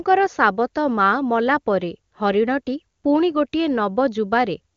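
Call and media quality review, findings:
No faults found in clip.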